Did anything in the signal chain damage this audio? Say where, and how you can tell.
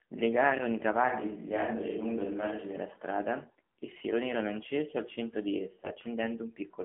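Yes. The whole clip passed through the AMR narrowband mobile codec, a codec-stage fault. Nothing sits above 4 kHz, and the band runs about 150 Hz to 3.4 kHz. The speech is buzzy and synthetic. That fits AMR-NB at a low rate near 7.4 kbps, with a sparse pulse model per frame.

From 1.09 to 2.77 s the speech turns roomy and hollow, with thinner bass. The change in and out is abrupt. The level barely shifts, and faint room noise appears roughly 30 dB down. The likely cause is a switch to a distant microphone at the capture stage.

From 5.84 to 5.98 s the speech turns hoarse, scratchy and gargly. Pitch and level hold roughly steady. These are AMR bit errors at the network stage. About seven 20 ms frames arrived with a few percent of unprotected bits flipped, misplacing the excitation pulses.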